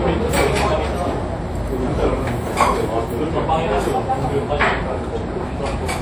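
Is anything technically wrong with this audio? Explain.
Yes. Transcoding between lossy codecs runs throughout the clip. The sound likely passed through HE-AAC at around 48 kbit/s and was then re-encoded with WMA 1 at about 64 kbit/s. The second encoder spends its bits preserving the first codec's artefacts and adds its own quantisation grain, so two layers of artefacts sit on top of each other. The band ends around 20.1 kHz, with nothing above it.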